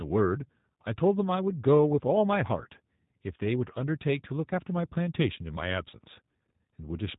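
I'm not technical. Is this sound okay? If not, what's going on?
No. From start to finish this speech has been squeezed through the G.729 codec, a phone-call compressor that rebuilds each voice from a rough model of the throat and a few pulses rather than sending the real sound. That's why it sounds slightly rough and synthetic, and nothing above about 3.8 kHz survives. A plain muffled telephone line would sound dull but natural; here the voice itself sounds artificially rebuilt.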